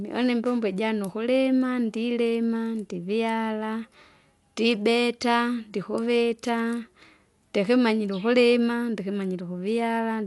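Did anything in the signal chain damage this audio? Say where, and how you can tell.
Yes. Throughout, the speech sounds dull, with nothing above 11.5 kHz and a rough, fluttering noise clinging to the voice. At the codec stage, this is likely Dolby Digital compression at a low bitrate, around 64 kbps, narrowing the band and filling starved frequency lines with dither noise.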